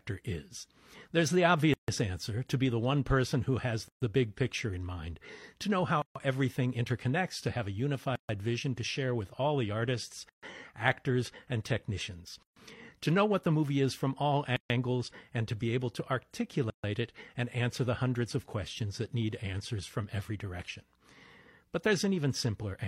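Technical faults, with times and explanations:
1.74, 3.88, 6.02, 8.16, 10.29, 12.43, 14.56 and 16.70 s, gap at a join of encoded pieces: the speech was encoded in 2-second pieces and joined untrimmed, so each piece's encoder start-up silence and end padding remain, leaving a 147 ms hole first, then 136 ms holes, before the speech resumes.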